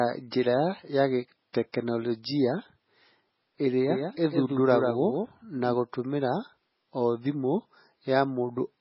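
MP3 compression runs through the whole clip, with nothing above 5.6 kHz and heavy damage throughout. The sound is watery and swirly, and sibilants chirp metallically. This is likely low-bitrate MP3 encoding, consistent with something near 16 kbps. With so few bits, the encoder drops weaker frequency lines, which flicker in and out from frame to frame, and it removes the treble above a fixed cut-off, leaving the speech dull and unstable.

Pre-echo appears at 1.53 s as a brief hiss, about 14 ms long, just before a sharp onset, which sounds softened. A transform codec spreads its quantisation noise across an entire block. When an attack lands late in that block, noise scaled to the loud part spills into the quiet moment before it, so the hiss arrives before the sound itself.

A doubled audio track runs from 3.90 s to 5.74 s. A second full-band copy of the speech trails the original by about 150 ms, at roughly 5 dB lower. 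The copy has no decay or room colouring, unlike a natural echo, and it begins and ends abruptly. The likely cause is the same audio being mixed in twice, either through a second, slower capture path or through an edit that left two copies out of step.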